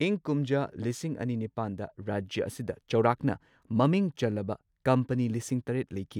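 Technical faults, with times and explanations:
Nothing in this speech recording stood out as a technical problem on listening.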